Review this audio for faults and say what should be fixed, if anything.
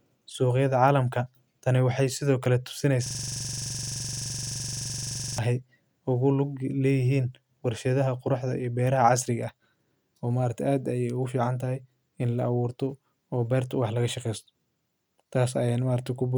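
There's a system hang loop from 3.06 to 5.38 s. Something froze the driver or machine, but the audio hardware kept replaying the same little chunk of its ring buffer. That chunk is 42.67 ms long, which fits a 2048-sample buffer, and it repeats over fifty times at 23.4 Hz, so the speech gets replaced by a fast, rattly buzz-stutter. To prevent it, have the audio driver mute or zero the buffer whenever the host stops feeding it new data.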